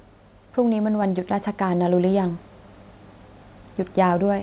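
At 1.02 s the speech and its background jump up together by about 3 dB: a microphone volume step-up, where the call software raised the input level at once. The sound stays narrowband through the G.711 call path, with nothing above 4 kHz.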